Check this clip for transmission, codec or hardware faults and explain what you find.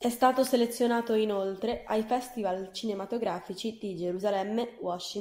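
Nothing faulty can be heard anywhere in this recording.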